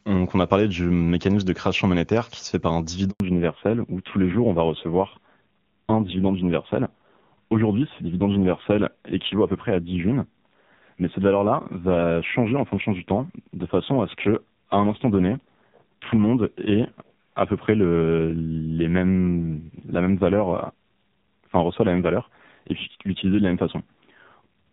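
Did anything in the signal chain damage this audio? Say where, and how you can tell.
Yes. A handover gap hits the network stage at 3.10 s, right after "se fait par un". The speech fades within a few tens of milliseconds and stays silent for 100 ms, until 3.20 s. That pattern fits a call being passed between networks with no speech frames arriving during the switch. Whatever was said in that window was never delivered, so nothing downstream can recover it.

A fallback to narrowband starts at 3.20 s, directly after the gap, and lasts to the end. Before it, the wideband HD Voice codec carries content up to about 7 kHz with faint or no coding damage, consistent with AMR-WB near 23.85 kbit/s. From 3.20 s nothing remains above 4 kHz, and the speech turns duller and rougher. This points to the link renegotiating onto a low-rate AMR narrowband mode, around 5.9 kbit/s.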